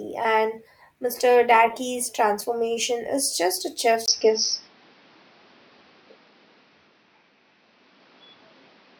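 Input switched to a poorer device, likely, at 4.06 s in this speech clip, right after "transformation is just a": a 20 ms gap, then audio cut off above 6.1 kHz, a level shift of around 5 dB and a new noise floor roughly 40 dB down, lasting to the end.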